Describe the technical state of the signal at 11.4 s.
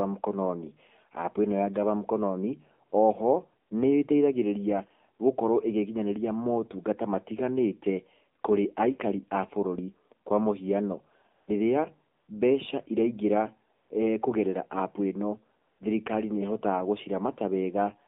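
At 11.4 s the background briefly changes character: from 11.36 to 11.48 s, about 120 ms, the real background sound gives way to a smooth, even hiss that switches in and out. This is AMR comfort noise. The phone judged the talker silent and stopped sending speech frames, so the receiving end filled the gap with synthetic noise built from a rough estimate of the background's level and spectral shape rather than the real signal.

Around that moment, and across the whole recording, the speech sounds thin, buzzy and somewhat synthetic. This is the AMR narrowband mobile codec at work. The band is confined to roughly 200 Hz to 3.6 kHz, so there is no low warmth and no high detail. The speech is rebuilt from a vocal-tract model driven by a few pulses per 5 ms subframe, and the plainly audible damage points to a low bitrate of about 7.4 kbps.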